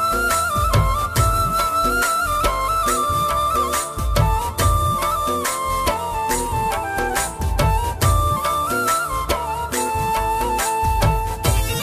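No audible technical faults appear anywhere in this recording.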